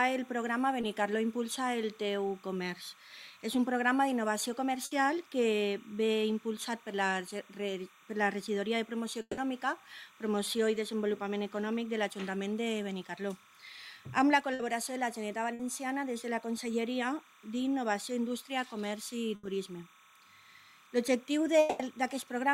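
Running under the whole clip is timecode bleed: a steady chirping warble switching between pitches around 1 and 2 kHz, sitting about 30 dB below the programme. It comes from linear timecode at 30 frames per second leaking in from a neighbouring track or cable. Unlike a hum or a single whine, it never settles on one pitch. The rapid alternation between two tones gives it a data-like texture that does not change with the sound in front of it.

At 0.81 to 0.85 s there is a short concealed packet loss. About 20 ms of audio never arrived in time, and the decoder filled the hole by extending the preceding sound before blending back into the real signal. It registers only as a tiny smear or wobble. What separates it from the longer losses is that there is no audible held buzz and no fade. The repair is over almost before it can be heard.

Bursts of packet loss follow at 4.85 to 4.93 s, 14.53 to 14.61 s, 15.53 to 15.61 s and 19.35 to 19.45 s. 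In each, a run of packets was lost, 60 ms of audio in the first three and 80 ms in the last. The receiver stretched the last sound into a brief held buzz or hiss that dips in level, and then the audio resumes further on with that stretch gone. These are longer than the 0.81 s smear.

At 9.21 to 9.39 s and 21.59 to 21.81 s there are longer gaps, likely long network dropouts. At 9.21 s, about 160 ms is replaced by a continuation of the last sound that fades to roughly 30 ms of silence before the audio returns. At 21.59 s, about 200 ms is covered by a fading continuation with no silent stretch. The length is what sets these apart from the bursts.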